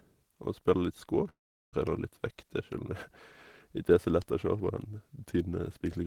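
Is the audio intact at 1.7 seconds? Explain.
No. At 1.7 seconds the sound has dropped to near silence. From 1.29 s the last sound is stretched into a buzzy tail that fades, leaving about 380 ms of quiet before the speech resumes at 1.75 s, with roughly 440 ms of it simply gone. This is likely a long network dropout: no audio reached the receiver, so it extended what it last had, then gave up and went silent.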